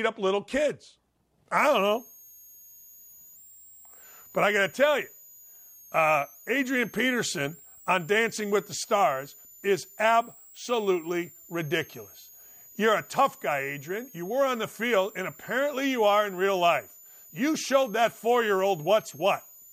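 From 1.57 s to the end, a switching supply whistle sits under the speech. A switching power supply is running in audible burst mode or beating with another one. The high tone moves between 6.1 and 7.9 kHz, around 7 kHz, roughly 25 dB below the speech.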